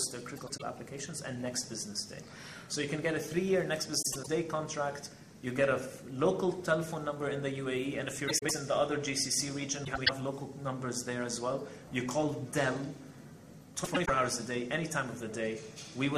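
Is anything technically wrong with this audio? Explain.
Yes: frames out of order at 0.36–0.62, 4.02–4.28, 8.28–8.51, 9.85–10.10 and 13.84–14.10 s. Two adjacent blocks of about 104.5 ms swap places, producing a garbled flutter. Unlike a dropout, no time is lost.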